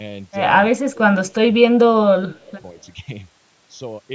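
Right from the start there's channel delay, i.e. comb filtering. One channel runs roughly a third of a millisecond late, and summed to mono that carves regular notches starting around 1.5 kHz, so the voice has a hollow, phasey edge the whole way through.

From 0.92 to 1.46 s the voice sinks by up to about 25 dB, then again from 1.75 to 2.54 s by up to about 20 dB, and briefly from 2.72 to 2.80 s by only about 5 dB. That's most likely speech suppressed in double talk: the echo canceller ducks the talker while the far end is also speaking.

Overlapping the second dip, from 2.43 to 2.62 s, there's a faint delayed copy of the voice, about 30 dB down and trailing by 216 ms. That's likely echo leak, where the far side's loudspeaker playback got past its canceller and came back.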